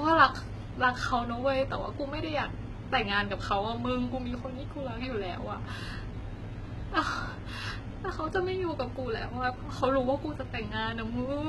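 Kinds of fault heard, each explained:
HE-AAC compression: s sounds come out gritty and lispy, the treble synthetic, with nothing above 11.8 kHz. The likely cause is spectral band replication rebuilding the top by copying lower bands upward, heavy damage that fits a bitrate around 16 kbps.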